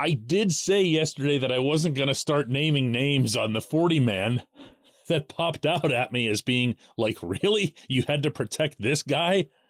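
Listening to the speech, nothing stood out as a technical fault at any point.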